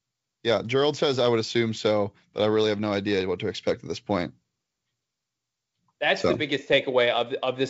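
Speech over G.722 wideband telephone coding at 64 kbit/s, with nothing technically wrong to report.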